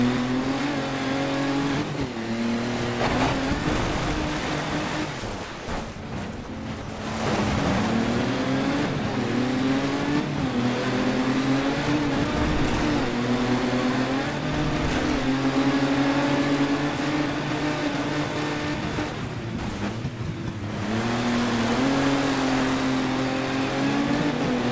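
Between 5.2 s and 7.0 s the sound repeatedly gives way to flat, steady noise: at 5.2 s, 5.44–5.68 s, 5.92–5.96 s, 6.44–6.48 s, 6.82–6.88 s and 6.98 s. This is likely sound dropped by the voice detector, filled with comfort noise. Unlike packet-loss concealment, nothing is repeated or smeared; the gaps hold featureless hiss until sending resumes.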